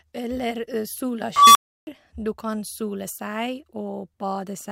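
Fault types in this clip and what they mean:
unstable filter: A recursive filter in the speech path went unstable, so its output fed on itself and grew without bound. Starting at 1.36 s, a tone around 1 kHz swells over about 190 ms until it clips and the arithmetic overflows, then the sound drops out for 320 ms before the filter resets, with the event over by 1.87 s. Acoustic feedback howl builds more slowly and never ends in silence, and a plain dropout has no rising tone before it.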